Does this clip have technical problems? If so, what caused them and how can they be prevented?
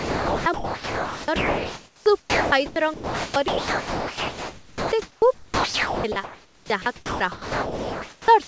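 Yes, there are two. Overdone noise removal runs through the whole clip. The suppressor was set too aggressively, so any frequency band near its noise estimate gets pushed right down, and quiet parts of the speech go with it. The background turns to near silence with twinkly specks. To prevent it, back off the suppression strength so it only takes out the room noise, which already sits about 36 dB under the speech.

The second problem covers the whole clip, from 0 to 8.48 s. The sound is choppy, and about 6.9 s of it has been replaced with comfort noise. That's most likely sound chopped by the voice detector, which keeps switching transmission off and cutting quiet syllables and word edges. To prevent it, lower the VAD threshold and lengthen its hangover, or just disable DTX on the sender.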